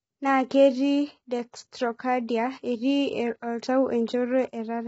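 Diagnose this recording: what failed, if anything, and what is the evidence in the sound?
The fault is at the codec stage, likely low-delay AAC compression of the AAC-ELD kind. Throughout, the speech sounds rough and grainy, with noise filling the gaps between harmonics. Nothing is present above 7.8 kHz. The heavy damage fits a bitrate around 16 kbps. Short frames resolve pitch poorly.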